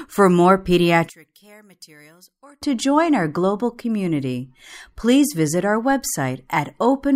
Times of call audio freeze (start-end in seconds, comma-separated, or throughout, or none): none